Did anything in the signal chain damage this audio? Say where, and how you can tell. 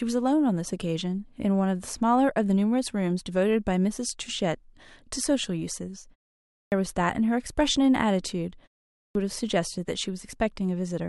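Yes, at the playback stage: a clipped start after a pause, twice. After a 0.39 s gap, speech resumes abruptly at 6.46 s with about 0.26 s of its onset missing, and after a 0.32 s gap the same happens at 8.91 s, losing about 0.24 s. The output device is dropping into a low-power or unlocked state during the short silences and needs roughly a quarter second to come back. Sound that arrives in that window is swallowed, so the speech starts mid-onset out of silence. Muted pauses also fall silent, but they resume in time and lose no speech.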